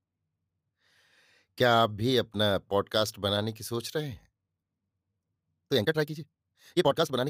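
Speech, with a time-stretched section from 5.68 s to the end. The pace jumps to about 1.85 times faster. The pitch holds steady. It sounds rushed, likely from a stretch that dropped short pieces.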